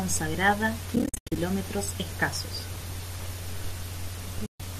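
AAC frame loss with muting strikes twice. Frames were dropped and the decoder zeroed their spectrum, so the speech fades into soft-edged gaps. These are scattered from 0.96 to 1.36 s, the longest near a tenth of a second, then one gap from 4.46 to 4.60 s.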